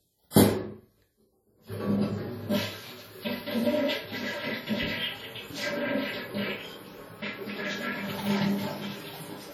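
A short hiss creeps in from 0.30 to 0.36 s, just ahead of a sharp attack that sounds smeared. This is pre-echo: quantisation noise spread across 58 ms fills the quiet moment before the hit.

Throughout, the sound is ringing and washy, with hiss that breathes with the signal and nothing above 19.8 kHz. This is WMA compression, likely heavily damaged at a low bitrate that fits about 32 kbps.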